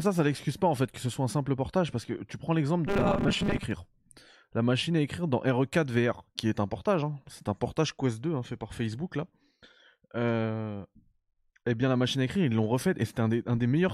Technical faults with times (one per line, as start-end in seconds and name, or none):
2.87-3.64 robotic sound from repeated short buffers